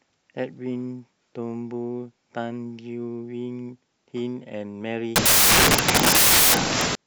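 Samples built from the wrong bytes take over this speech clip from 5.16 s to 6.95 s. The reader assembles each sample with its bytes misordered or misaligned, so the rapidly changing low bits land in the most significant position, turning the audio into loud noise that is close to white on louder sounds.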